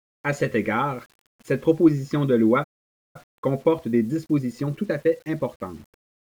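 Across the whole speech clip there is a grainy, rough distortion that tracks the voice, with quiet tails turning gritty and the noise sitting only some 35 dB below the speech. This is likely low bit depth without dither: the audio was rounded to 8 bits, so the error moves with the signal.

At 2.63 s the speech cuts off mid-flow into silence for about half a second, resuming at 3.16 s. The likely cause is a playback stall, where the player ran short of data or its thread was blocked.

From 3.16 s to 6.16 s the speech sounds hurried, running about 1.1 times normal speed at unchanged pitch. This is time-compressed catch-up: after the stall, the player trims its backlog by cutting out and cross-fading short slices.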